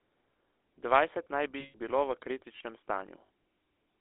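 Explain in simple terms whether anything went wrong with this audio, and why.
The voice sounds buzzy, gravelly and muffled throughout, squeezed into a narrow telephone band. That is the GSM full-rate codec, an old mobile-phone format that rebuilds speech from a rough model.

From 1.6 to 1.75 s, and again briefly around 3.26 to 3.3 s, the sound freezes into a short metallic ring. These are lost GSM frames, where missing chunks were filled by repeating the last good one.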